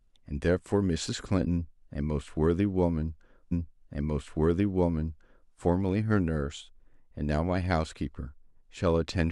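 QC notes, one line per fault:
3.51–5.51 s, stream segment repeated: the player queued the same chunk of the speech twice, so about 2.0 s of material plays again. A short blip marks the jump back at 3.51 s, where playback snaps to the segment's start and the timeline runs 2 s long.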